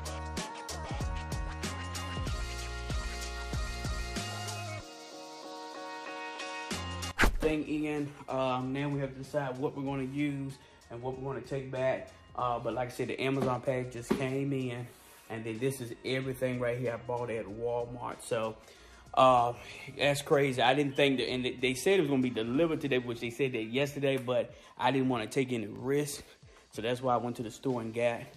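Repeated buffer at 15.98–16.02 s and 25.76–25.78 s: delayed audio made the device replay one short piece, about 20 ms long, twice and then once, giving brief stutters with hard joins.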